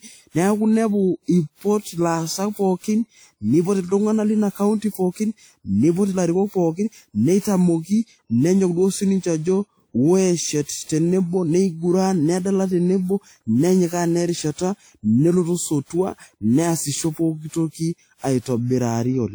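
From start to finish the speech has a swirling, smeared, hollow quality, with consonant attacks blurred and a watery shimmer hanging on the voice, though the spectrum still extends to about 20.1 kHz. That mix points to generation loss, likely from encoding with a WMA-type codec at around 96 kbit/s several times over, perhaps roughly seven passes. Each pass requantised the audio on a shifted frame grid, so the noise compounded.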